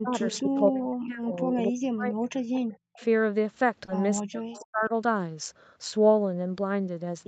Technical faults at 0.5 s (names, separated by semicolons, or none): speech suppressed in double talk; echo leak